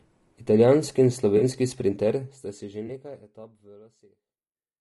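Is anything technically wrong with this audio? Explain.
Yes. Throughout the speech there is plainly audible roughness and graininess, with noise filling the gaps between the harmonics and a top band that sounds thin and synthetic. This is most likely low-delay AAC compression, such as AAC-ELD, run at a low bitrate, around 32 kbps. Its short frames resolve the pitch harmonics poorly, so bits run out and the coder fills with noise. Unlike band-limiting from a low sample rate, the top band is still present but sounds artificial.

At 1.37 to 1.43 s, and again at 2.87 to 2.90 s, there is AAC frame loss with concealment. The decoder lost data and rebuilt it from the last good spectrum, producing a brief smeared, noisy, phasey patch rather than silence or a click. The first gap is longer, which fits two lost frames, and the second fits one. These patches differ from the steady codec roughness because they are short, localised breaks in an otherwise continuous texture. 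The level also fades out smoothly from around 2 s to the end.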